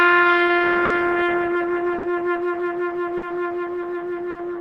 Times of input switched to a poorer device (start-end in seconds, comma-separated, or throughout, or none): none